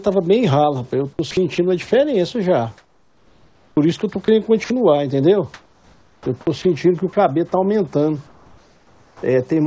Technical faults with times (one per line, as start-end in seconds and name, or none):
1.31-1.91 sound chopped by the voice detector
2.78-4.70 sound chopped by the voice detector
5.54-7.16 sound chopped by the voice detector
8.27-9.23 comfort noise in place of the background
9.17-9.23 onset clipped by the voice detector